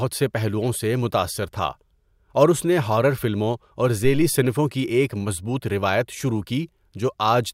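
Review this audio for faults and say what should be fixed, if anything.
A phantom power thump hits at 4.05 s, right after "نے ہارر فلموں اور", and its tail runs to about 4.33 s. Switching the supply on a live input sends a voltage step through the coupling capacitors, producing a deep thump peaking at about -15 dBFS and dying away over roughly 65 ms. On a waveform it shows as one large low-frequency swing. On a spectrogram it appears as a dark burst concentrated in the lowest bands. To prevent it, mute the channel or pull the fader down before toggling phantom power.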